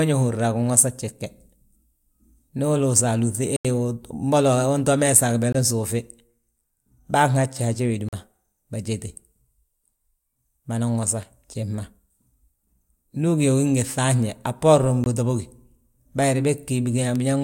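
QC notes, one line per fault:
3.56 s, 5.53 s, 8.09 s and 15.04 s (the last right after "a bboorin"): block of digital silence. The speech cuts abruptly to short holes of 85, 21, 43 and 21 ms, with no fade. These are zero blocks from an output buffer not filled in time or from invalid calculated values, and their lengths fit 4096-, 1024- and 2048-sample blocks.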